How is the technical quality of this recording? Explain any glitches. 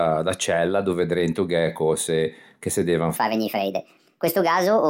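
The recording has one glitch, near the end. From 3.16 s to the end, just after "cöse che se devan", there is a section at the wrong speed: the speech runs 1.41 times too fast and jumps up roughly seven semitones, likely because that stretch was played against the wrong clock. Unlike a pitch-shift fault, tempo and pitch rise together and abruptly, so the speech suddenly turns hurried and squeaky at the same moment.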